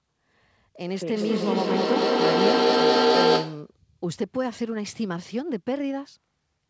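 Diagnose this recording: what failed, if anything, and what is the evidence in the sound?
Feedback howl, an acoustic loop between two devices sharing the room on the call. From 1.16 to 3.77 s a tone near 500 Hz swells to about 8 dB above the speech, pulsing every 200 ms or so, each trip round gaining level until the loop breaks.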